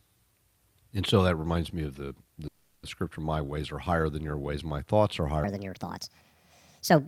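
Right after "me of the the", at 2.47 s, there's a call audio freeze: the last sound smears into a fading buzz for about 360 ms until "scripture my" resumes at 2.86 s. Nothing is lost, but everything after it runs 360 ms late, likely because packets stalled and the jitter buffer ran dry.

Then at 5.44 s, just after "ways my thoughts are", the section plays at the wrong speed through to the end, 1.43 times too fast, so it sounds hurried and about seven semitones higher, likely played against the wrong clock.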